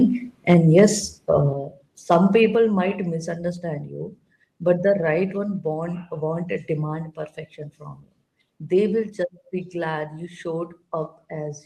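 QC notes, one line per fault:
0.49–0.84 s, microphone overload: peaks overshoot the converter ceiling by about 4 dB. A small share of samples gets flat-topped, giving a harsh crackle. This is likely caused by input gain set too high.
0.54, 1.53, 2.55 and 9.03 s, microphone volume stepped down: voice and background drop abruptly by about 3, 5, 3 and 3 dB. This is likely the call software lowering input volume after the overload.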